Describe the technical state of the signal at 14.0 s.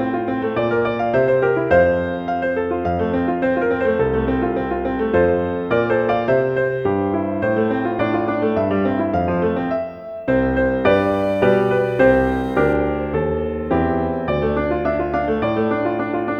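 A nearby 2G phone in a call with its user silent is sending sparse radio bursts, which the audio circuit rectifies into GSM signalling bursts from 12.70 to 14.32 s: a faint pattern of even ticks with a longer 217 Hz buzz twice a second, well below the wanted sound.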